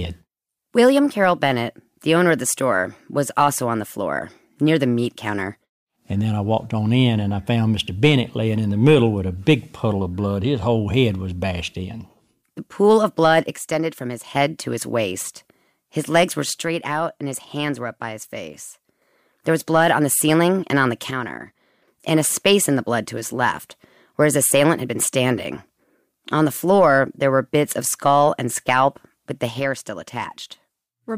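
At 13.56 to 14.36 s, 16.62 to 19.02 s, 21.11 to 21.88 s and 29.60 s to the end, the speech abruptly drops by about 6 dB, then returns after each of the first three. This is likely one channel drops out, leaving half the mono sum.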